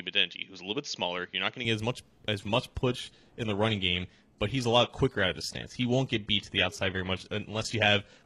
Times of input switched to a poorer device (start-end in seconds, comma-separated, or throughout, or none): 0.00-1.65